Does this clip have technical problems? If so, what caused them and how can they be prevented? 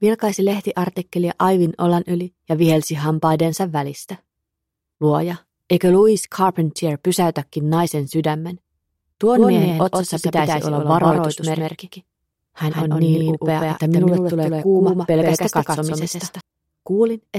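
Yes. From 9.35 s to 16.41 s the audio has a doubled audio track: a second, full-band copy about 150 ms behind, at roughly the same loudness, with no decay or room colour, and it starts and stops abruptly. On a waveform each transient appears twice; a spectrogram shows every event repeated as an identical, evenly offset ghost. The likely cause is the signal being captured again through a slower path, or two misaligned copies left in an edit. To prevent it, monitor and record from a single path and mute duplicate tracks before export.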